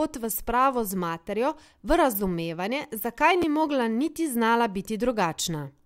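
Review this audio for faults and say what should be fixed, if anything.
At 3.42 s there are chunks out of order. A short block of speech, about 5.33 ms long, plays two chunks late, after the material that should follow it. Nothing is missing, but the sequence is scrambled. This leaves three hard joins, heard as a brief jumbled blip. To prevent it, tag each buffer with a sequence number and reorder before writing.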